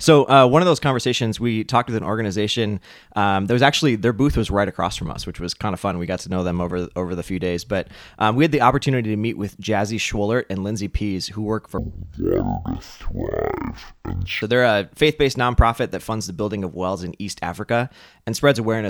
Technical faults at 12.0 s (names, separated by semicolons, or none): stereo read as mono